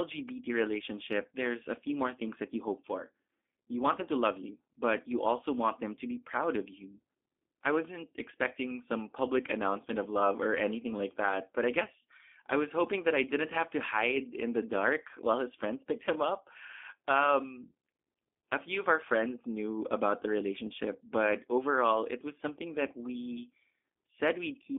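Speech passed through a G.729 codec for the whole clip, a low-rate narrowband coder whose roughness fits roughly 8 kbit/s. Each 10 ms frame is rebuilt from a vocal tract filter and a few pulses, giving a plainly audible synthetic buzz, with the band held between 250 Hz and 3.5 kHz.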